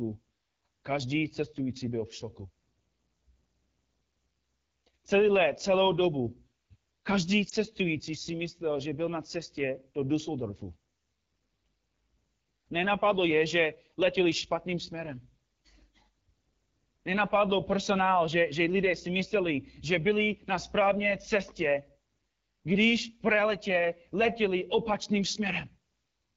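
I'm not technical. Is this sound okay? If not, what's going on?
No. The AMR wideband (HD Voice) codec is audible from start to finish. This is the compression mobile networks use for HD calls. It rebuilds speech from a simple model of the throat and mouth, and fills the top of the sound with shaped noise. Here it is running at one of its lowest quality settings, so the speech comes across rough and raspy rather than clean, and that roughness is plainly noticeable throughout.

There is also one lost AMR speech frame, between 7.49 and 7.54 seconds. A single tiny slice of the call, one fiftieth of a second, was damaged in transmission and thrown away. The phone papered over the gap by repeating its last good settings at a lower level. You hear it as a brief dip or warble before the speech carries on.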